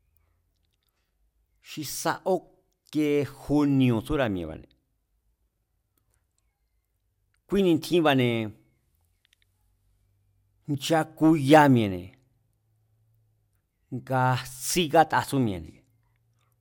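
Nothing goes wrong anywhere in this speech recording, so there's no technical fault to point to at any moment.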